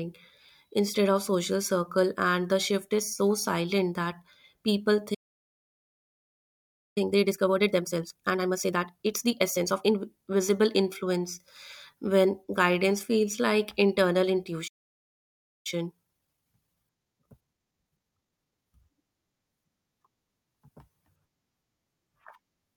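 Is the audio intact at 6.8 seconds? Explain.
No. At 6.8 seconds a playback stall is still under way: the player likely ran short of data or had its thread blocked, so output halts from 5.14 to 6.98 s. The speech cuts off mid-flow into 1.82 s of silence before resuming.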